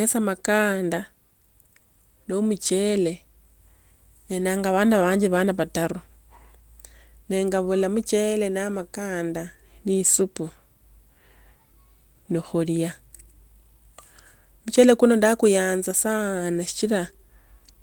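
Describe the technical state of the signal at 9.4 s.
At 9.4 s the speech signal is intact, with no fault audible at that moment.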